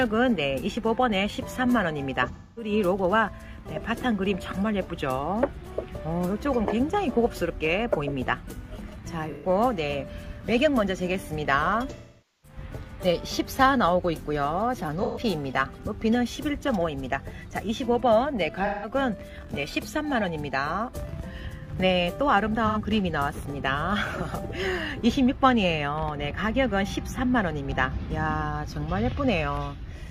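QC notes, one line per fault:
2.32–2.72 s, 9.31–9.47 s, 11.90–12.58 s, 15.03–15.19 s, 18.65–18.89 s, 22.67–22.77 s: AAC frame loss with concealment. The decoder filled each gap, from 85 to 469 ms long, by reusing the last good spectrum with altered phase or energy, so each patch sounds smeared, noisy or phasey.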